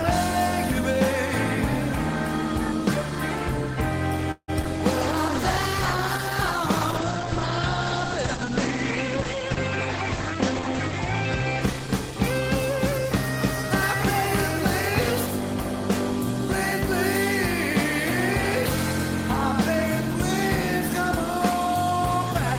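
Between 4.31 and 4.67 s the audio breaks up with repeated packet loss, giving a robotic sound: three holes, the longest 167 ms, with about half that stretch patched by extending the preceding sound. Unlike a plain dropout, the gaps are filled with a continuation of the preceding sound instead of falling silent. From 5.02 to 12.36 s a call bitrate drop takes the stream from 32 to 12 kbps, holding at the lowest rate for about 5.8 s, and the bandwidth narrows from 20 kHz to 8 kHz. A simple low-pass filter would only dull the top end, but here the muffling comes with rough, watery coding artefacts, and it clears when the rate recovers. Overlapping that, from 10.16 to 13.64 s, a jitter buffer speed-up plays the audio at 103% of normal speed, trimming about a tenth of a second of backlog by removing short pitch-period slices. It runs slightly faster at the same pitch, which separates it from a resampling error, where the pitch would rise along with the speed.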